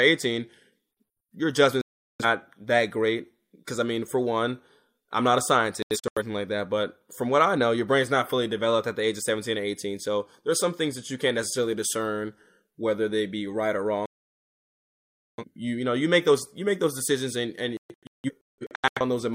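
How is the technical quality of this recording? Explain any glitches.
The recording has four glitches, all digital broadcast dropouts. Each time, the receiver stopped getting valid frames and muted until good ones came back, so the audio sent during those moments is lost rather than just degraded.

At 1.81 to 2.25 s there is one solid hole of about 0.38 s. At 5.82 to 6.22 s, between "one I'm not a" and "like that but from", the speech is chopped by short gaps spread over 0.34 s, none longer than 85 ms. At 14.06 to 15.44 s, after "they be right or" and before "you you know you", the speech drops out for 1.3 s. From 17.77 to 19.01 s, after "those decisions and and", broken holes recur across 1.2 s, the longest lasting 0.17 s.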